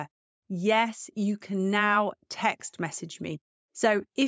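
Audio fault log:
Nothing in the speech stood out as a fault on listening.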